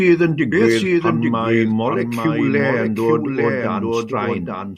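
A doubled audio track runs through the whole clip: a second copy of the speech follows about a second behind the original, somewhat quieter, roughly 5 dB down. The copy is full-band and dry, with no decay or room colour, so it sounds like an overlapping repeat rather than an echo. This is likely caused by the same signal being captured twice, once through a slower path, or by an edit holding two copies out of step.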